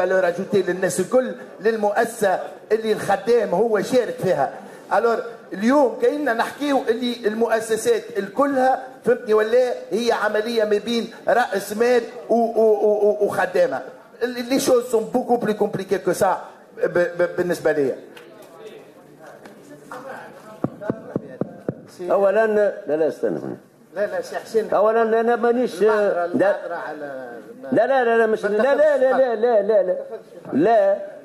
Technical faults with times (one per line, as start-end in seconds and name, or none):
none